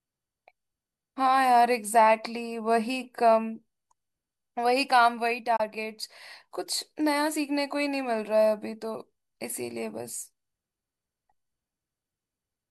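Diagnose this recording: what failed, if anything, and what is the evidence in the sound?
The digital broadcast dropout happened at reception and decoding. The receiver stopped getting a usable frame, probably because one failed its checksum, and muted until valid data returned. In the speech, the level fades out over about 8 ms at 5.56 s and comes back by 5.60 s. About 24 ms of programme is simply missing, which fits the loss of a single frame. Nothing replaces the lost audio, so the speech jumps forward across a short hole instead of being smeared or concealed.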